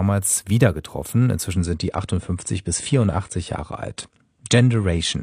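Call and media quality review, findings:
Speech goes dull and swirly from 1.53 s to the end, with no gap: nothing above 9.8 kHz. Adaptive stream at a lower bitrate. Player switched down a rendition, which fits AAC-LC dropping from about 96 to 32 kbit/s.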